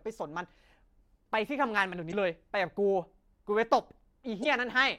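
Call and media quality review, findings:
Damaged data in a compressed stream, 2.08–2.14 s and 4.40–4.46 s: brief glitch in speech, about 60 ms each. Probable component: decoder input. Corrupted frame bytes misread, decoder loses sync, hunts for the next valid frame header.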